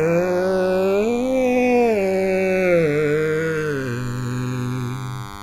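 From the start, DECT cordless phone buzz sits under the music: a nearby DECT phone or base station's 100 Hz radio bursts are rectified, giving a thin, harmonic-rich buzz about 15 dB down. The channels drift apart over the whole clip, their separate clocks differing by roughly 150 ppm; delay reaches about a millisecond, so mono playback flanges slowly.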